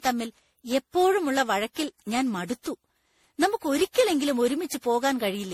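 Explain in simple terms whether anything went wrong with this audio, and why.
Throughout the clip the speech sounds swirly, hollow and smeared, with the starts of sounds blurred. That is generation loss: the audio was likely saved as an MP3 about ten times over, and each re-save added fresh damage on top of the last.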